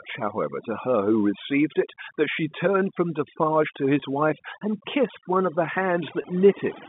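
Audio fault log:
Throughout: overdone noise removal. A noise reducer set far too hard pushes individual frequency bands down to nothing whenever their level sits close to what it takes for background noise. The gaps between phrases drop to near silence, speckled with small twinkling tones where isolated bands flicker on and off. Softer parts of the speech fall under the same threshold and are stripped away inside the narrow telephone band of roughly 150 Hz to 3.6 kHz.
4.00–4.02 s and 6.22–6.24 s: packet loss with pitch repetition. Each gap lasts about 20 ms, which fits a single lost packet. The receiver fills it by repeating the last pitch period it received. A gap this short stays within the repetition's fade-out, so nothing drops to silence. Instead, each spot sounds like a briefly held, slightly buzzy tone. Normal speech then returns through a short cross-fade.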